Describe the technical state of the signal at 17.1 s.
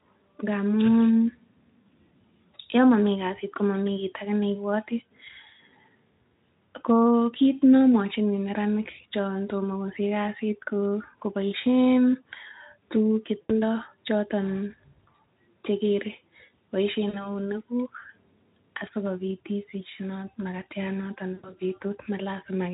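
At 17.1 s there is VoIP packet loss concealed by the speech codec, running from 17.09 to 17.31 s. About 40 ms of audio goes missing, which fits two 20 ms frames, and the Speex decoder fills the gap by repeating its last pitch and spectral envelope at falling gain, giving a brief stretched sound, a buzzy tone or coloured noise that fades. On a spectrogram, a flat, unchanging stretch fades out. The waveform shows a shrinking envelope, then weak or distorted recovery until about 17.31 s.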